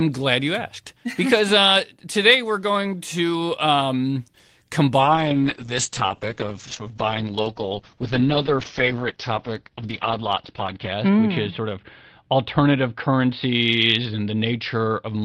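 At 5.0 s the call's bandwidth estimate collapses and the encoder is told to drop from 32 kbps to 8 kbps, a call bitrate drop that lasts to the end of the clip. At the lowest rate, held for about 5.9 s, the codec spends far fewer bits on each frame and narrows the coded band from 20 kHz to 6 kHz. The speech loses its airy top end and sounds muffled, with a rough, watery texture.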